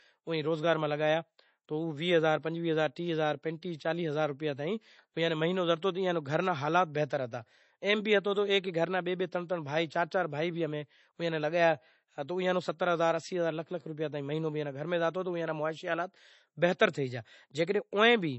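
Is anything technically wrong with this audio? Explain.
Yes. MP3 compression runs throughout the speech: nothing is audible above 8 kHz, and a watery, swirling quality is plainly audible, with chirpy s sounds. The likely cause is an encoder starved of bits, fitting roughly 32 kbps, cutting the treble and zeroing weak frequency lines that flicker between frames.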